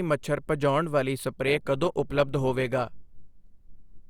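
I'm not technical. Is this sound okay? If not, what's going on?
No. At 1.36 s, the speech switches to an adaptive stream at a lower bitrate. The connection slowed. It turns suddenly grainier until the end, with no gap.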